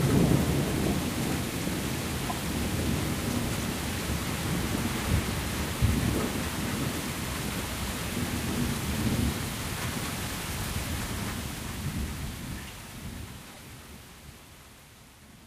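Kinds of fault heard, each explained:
Corrupt frame decoded: at 2.28, 9.40 and 13.53 s, damaged compressed frames were played anyway, producing brief blips of misplaced energy, loudest first and faintest last.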